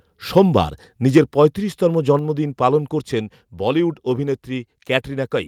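At 0.37 to 0.41 s and again at 1.16 to 1.18 s, the speech turns harsh and crackly. This is microphone overload, likely from input volume set too high. Peaks run about 2 dB, then about 3 dB, past the converter's limit. Their tops are flattened.

At 1.18 s, right after the second distorted peak, speech and background drop together, about 2 dB in one step. The microphone volume stepped down. The call software likely reacted to the clipping by lowering the input volume.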